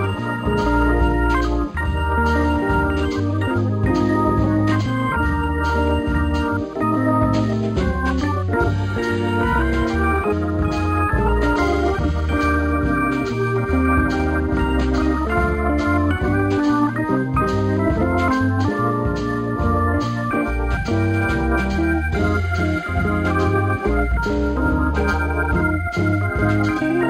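Imaging from linear upsampling runs the full length of the clip: the high end sounds dulled, with a faint metallic shimmer on bright transients. Straight-line interpolation, which fits a rate raised from 11 kHz to 48 kHz, leaves a mirrored image near 5.5 to 11 kHz, roughly 35 dB down.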